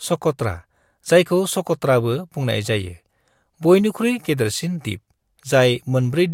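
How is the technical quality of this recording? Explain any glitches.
No glitches or technical faults can be heard anywhere.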